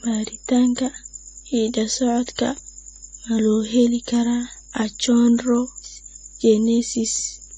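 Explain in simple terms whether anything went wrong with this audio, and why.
Two things went wrong, and both last the whole clip.

Mains hum: electricity from the power supply leaked into the recording path. The result is a steady, low 50 Hz hum underneath the speech from start to finish. It is quiet but never stops, a bit like a buzzing fridge in the room.

Low-bitrate audio saved at a high bitrate: the speech was likely first squeezed into a small, low-quality file and later re-saved as a bigger MP3. Re-saving can't bring back what was already thrown away, so the whole clip sounds dull, with nothing above 9 kHz.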